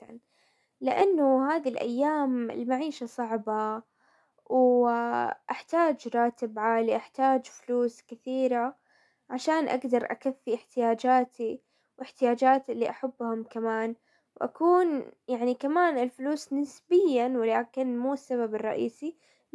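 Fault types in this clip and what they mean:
No technical faults detected.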